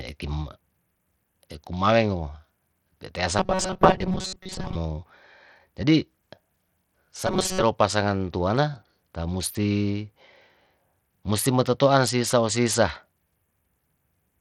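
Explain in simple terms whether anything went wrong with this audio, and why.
The speech sounds dull and gritty the whole way through: the crisp top end flickers or vanishes and a rough hiss clings to it. This is likely Bluetooth SBC compression, a simple wireless codec that starves the highest frequencies of data when squeezed hard.

From 3.39 to 4.75 s, and again from 7.27 to 7.63 s, the speech turns into a stiff metallic buzz near 188 Hz. This is robotic sound from repeated short buffers. Audio was likely arriving too slowly, so tiny chunks of about 5 ms were looped to fill the gaps, replacing most of the real sound.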